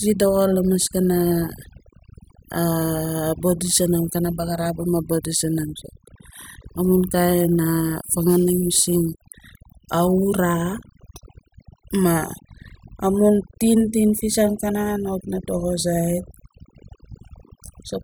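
Overdone noise removal runs through the whole recording. The noise reduction was set far too strong. It cuts individual frequency bands whenever they sit near its noise estimate. Quiet parts of the voice vanish too. The background drops and breaks up into twinkling specks.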